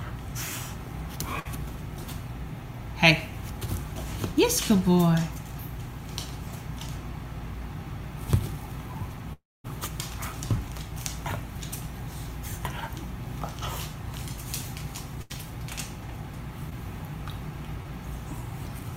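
At 1.39 to 1.47 s there's a burst of packet loss. A run of packets didn't make it in time, so the receiver stretched the last bit of sound for about 56 ms and faded it down, which comes across as a short held buzz or hiss. When the audio picks back up, about 60 ms is simply gone. The same thing happens at 15.22 to 15.32 s, a little longer there, with about 78 ms of filler covering an 80 ms hole.

The bigger one is around 9.33 to 9.66 s, a long network dropout, most likely a stretch where nothing arrived at all. The receiver keeps the last sound going as a fading tail, and once that dies away you get roughly a quarter second of near-silence before the audio comes back. About 320 ms is missing in total, so there's a clear jump in the flow rather than a smear.

Near the end there are two tiny ones, short concealed packet loss at 16.70 to 16.73 s and again at 17.83 to 17.87 s. Each time about 20 ms never reached the decoder, and the concealment papered over it by extending what was just before and blending back in. 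You hear it as a quick smear or wobble.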